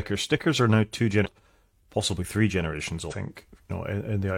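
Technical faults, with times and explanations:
1.21–1.26 s and 3.07–3.14 s, damaged data in a compressed stream: corrupted bytes make the decoder misread frames and lose sync, briefly disrupting the speech until it finds the next frame header.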